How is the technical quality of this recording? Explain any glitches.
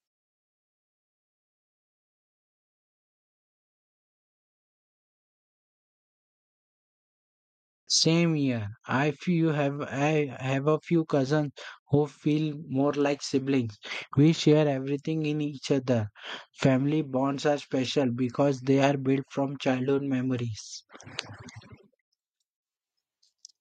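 One glitch stands out: a clipped start after a pause at 7.79 s, where the sound resumes after roughly 7.8 s of silence. The output device appears to have gone idle during the long gap and needed time to wake and lock again, so the first 83 ms of speech, through 7.87 s, never reached the output. The word therefore begins abruptly, missing its opening sounds. On a waveform, the signal jumps from flat silence straight into speech with no natural onset. A spectrogram shows energy appearing instantly across frequencies rather than building up, and the first portion of the word is simply absent.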